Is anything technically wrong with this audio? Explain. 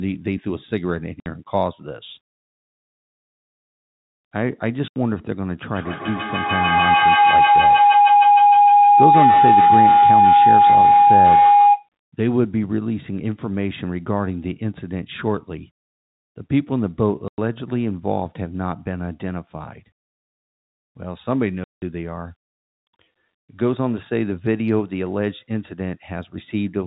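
Yes, there are two faults. Packet loss filled with silence at 1.2, 4.88, 17.28 and 21.64 s: lost packets were replaced by silence, leaving hard-edged gaps of 60, 80, 100 and 180 ms, consistent with 20 ms packets.

Feedback howl from 5.7 to 11.89 s: two devices in one room form a gaining loop with a delay of roughly 150 ms, building a howl near 700 Hz that peaks about 9 dB above the speech.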